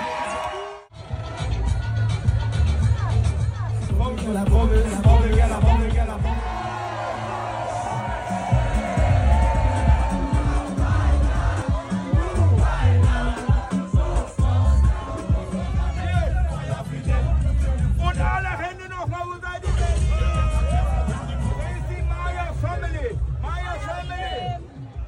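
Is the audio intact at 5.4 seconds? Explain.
No, a doubled audio track runs from 2.28 to 11.62 s: a dry copy trails by about half a second, somewhat quieter, likely from a second, slower capture path.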